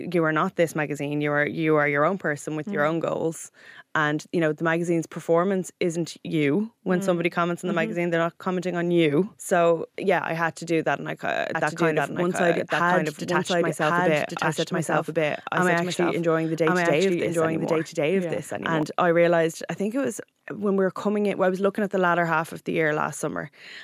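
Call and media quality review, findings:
Speech heard twice, 11.55–18.83 s: second full-band copy trails by about a second at roughly equal level, dry, cutting in and out abruptly; starts just before "I realized I think". Doubled audio track, likely a second, slower capture path.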